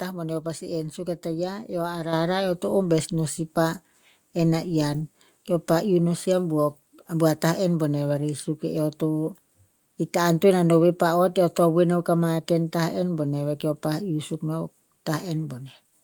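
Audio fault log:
2.13 s, microphone volume stepped up: speech and background jump about 7 dB louder together in one step, as the input gain was raised, not a fade or compressor swell.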